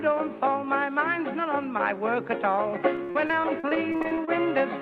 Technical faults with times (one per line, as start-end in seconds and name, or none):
2.95-4.29 repeated packet loss (robotic sound)